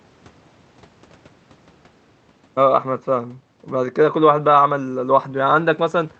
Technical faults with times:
none

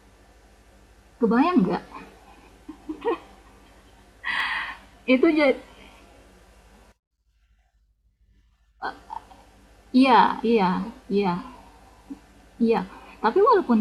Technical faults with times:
4.40 dropped samples
10.29 dropped samples
12.78 dropped samples

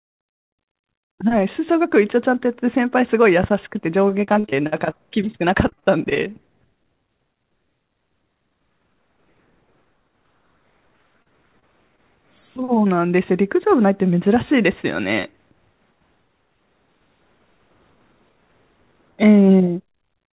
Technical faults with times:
4.24-6.33 repeated packet loss (robotic sound)
11.22-11.27 short concealed packet loss
11.59-11.64 short concealed packet loss
11.96-12.00 short concealed packet loss

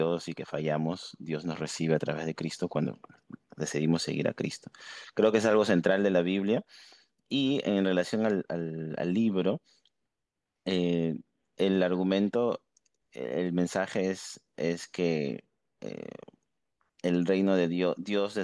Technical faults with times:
none

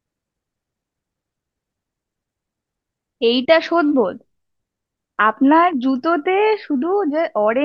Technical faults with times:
none

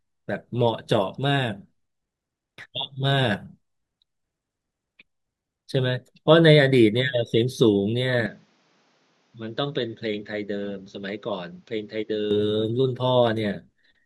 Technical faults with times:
8.26-12.31 input switched to a poorer device

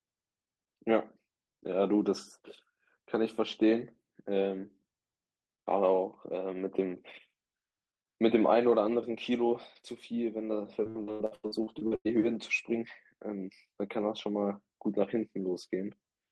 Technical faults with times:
10.83-12.07 repeated packet loss (robotic sound)

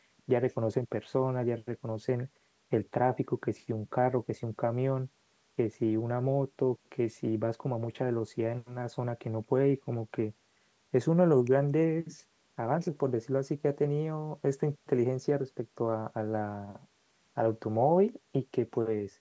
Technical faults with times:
none

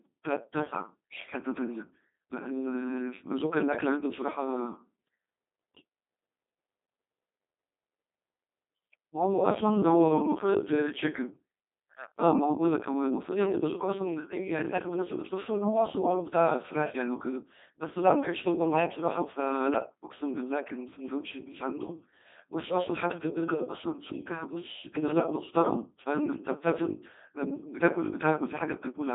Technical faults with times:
0.00-29.15 Codec 2 vocoder

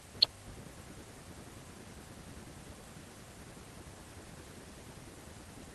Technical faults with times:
none

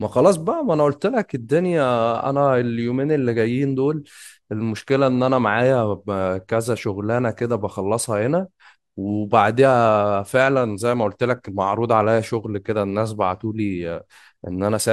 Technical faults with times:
none

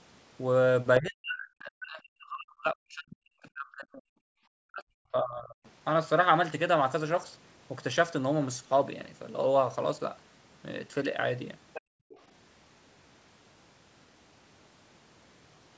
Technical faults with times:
0.99-4.05 speech suppressed in double talk
4.63-5.64 speech suppressed in double talk
11.73-11.81 other side's voice leaking through
11.81-12.09 background gated by the echo canceller
12.09-12.20 other side's voice leaking through

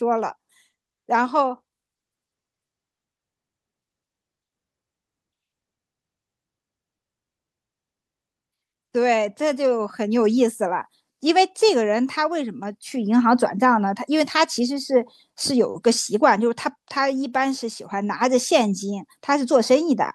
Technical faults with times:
none

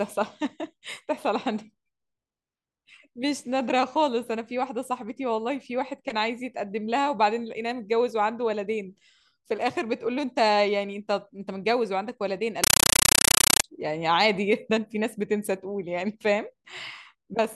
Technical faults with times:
12.64-13.64 compressed stream played as audio

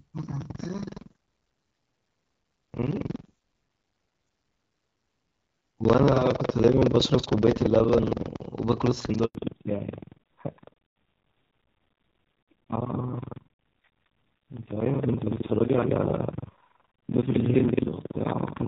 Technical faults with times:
0.00-18.67 buffer tearing
9.25-9.35 handover gap
9.35-18.67 fallback to narrowband

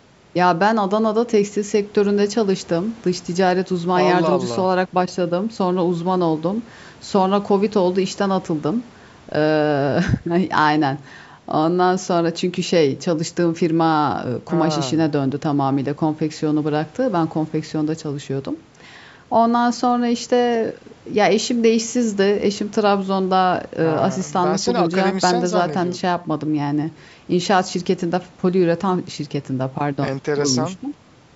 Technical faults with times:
none

